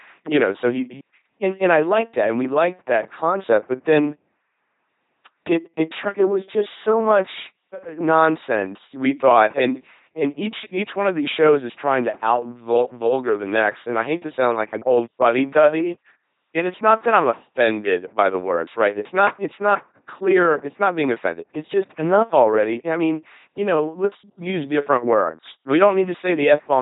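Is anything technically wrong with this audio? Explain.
Yes. An LPC-10 vocoder runs throughout the speech clip, with nothing above 3.8 kHz. It models the voice as a short all-pole vocal tract filter excited by either a pulse train or noise, and each frame is forced to be fully voiced or fully unvoiced. The damage is heavy, consistent with a 2.4 kbit/s vocoder: a buzzing, mechanical robot voice, with stray buzz or hiss wherever the voicing decision lands wrong.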